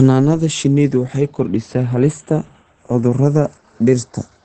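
From the start, the two channels of this speech recording are drifting apart: they were captured on separate clocks that disagree by a few tens of parts per million, so the delay between them slowly grows to a fraction of a millisecond by the end. When the channels are summed to mono, comb-filter notches creep through the spectrum and give a slow flanging. On a spectrogram of the mono sum, these show as gently sliding dark bands.

Throughout the clip, the speech sounds muffled and hoarse, with nothing above 8.9 kHz. A spectrogram shows a hard ceiling at that frequency and smeared, blotchy detail below it. This points to heavy low-bitrate compression, likely Opus running in its SILK speech mode at wideband. That would fit a rate of around 12 kbps, where the encoder trades brightness and fine texture for a coarse model of the voice.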